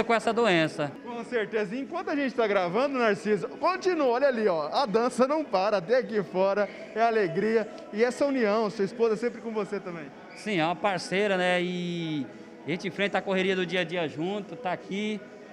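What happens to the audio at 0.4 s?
At 0.4 s you're right inside a run of clock slip clicks that goes from 0.19 s to 15.50 s. A single sample drops or repeats about every tenth of a second, which fits two unsynchronised clocks disagreeing by roughly 200 ppm, likely. It comes through as a faint, steady ticking.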